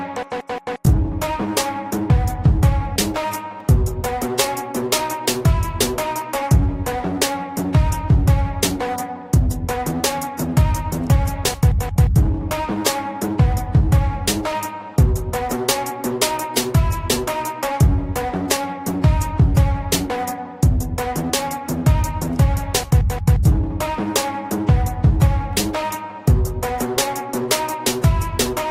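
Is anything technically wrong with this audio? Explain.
Yes. At 3.60 s there is a single sharp click, and the likely cause is dropped samples: a fraction of a millisecond of the stream goes missing, so the waveform jumps abruptly to a later value. The step is too brief to remove any audible sound, leaving only the click.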